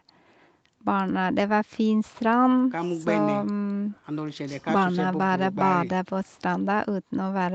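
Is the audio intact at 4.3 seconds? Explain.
Yes, the speech at 4.3 seconds is intact, with no fault at that moment.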